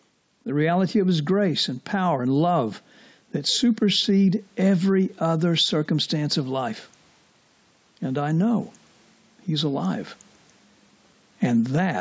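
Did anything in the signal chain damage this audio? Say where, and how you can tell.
Yes. Gain pumping runs through the whole speech clip, likely from input gain set far too high with a fast limiter or compressor clawing it back. The room noise sits about 44 dB under the speech, and the gain swings by around 10 dB. On a waveform the peaks look flattened and the gaps fill in; on a spectrogram the noise floor brightens between phrases.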